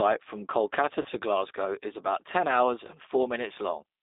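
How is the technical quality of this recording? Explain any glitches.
Technical quality is limited by narrowband low-bitrate voice coding throughout, plus one short dropout glitch.

G.729 codec, across the full clip: the speech is confined to roughly 250 Hz to 3.7 kHz, and the coding damage is plainly audible as a rough, slightly synthetic texture. The character fits G.729A at 8 kbit/s, which models each 10 ms frame as a vocal tract filter driven by a pitch predictor and a handful of pulses rather than storing the waveform, so fine detail and everything above the line band are gone.

VoIP packet loss concealed by the speech codec, from 1.02 to 1.07 s: about 30 ms of audio went missing, consistent with a single lost packet. The decoder filled the gap by repeating its last pitch and filter settings at decreasing gain, so the sound smears into a brief buzzy tone or coloured noise that fades, instead of a clean cut. 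Because each frame depends on the previous one, the degradation lingers for tens of milliseconds or more past the gap before the signal recovers.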